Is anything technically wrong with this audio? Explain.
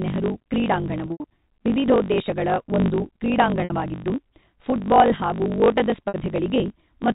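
Yes. Two faults are audible.

A block size mismatch (truncated) runs throughout. Each block loses its end, which fits 1024-sample blocks. This gives a steady 50 Hz buzz, and the speech runs 1.16 times fast at near-normal pitch.

Packet loss with pitch repetition occurs at 1.08 to 1.24 s, 3.64 to 3.70 s, and 6.08 to 6.14 s. The receiver repeats the last pitch period to cover the missing audio. The first event spreads 120 ms of loss over 160 ms, with an 80 ms longest gap, before "ವಿವಿಧೋದ್ದೇಶಗಳ ಒಂದು". The other two lose 60 ms each and sound like a briefly held, buzzy tone. Through all of this, the telephone-band G.711 coding cuts everything above 4 kHz.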